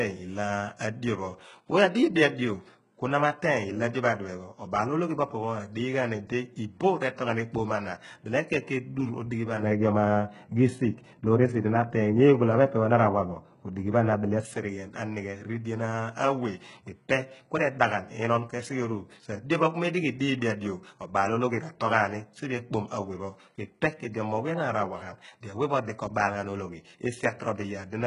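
Speech, heavily damaged throughout by what is likely HE-AAC compression at a very low bitrate, which fits a stream of around 12 kbps. The encoder transmits only the lower spectrum and synthesises the treble by spectral band replication, so nothing real exists above about 11.1 kHz. The upper band is patched-up copies of lower bands, and its harmonics no longer align with those below. Sibilants come out gritty and metallic, with a lisping, synthetic edge. From 9.63 to 14.45 s, just before "anighe ridien", de-emphasis was applied wrongly: a treble-cutting filter meant to reverse pre-emphasis was run on audio that never had it, or ran a second time. The result is a smooth downward tilt of about 11 dB at 10 kHz relative to 1 kHz, so that stretch sounds dull and muffled before the brighter, codec-coloured treble returns.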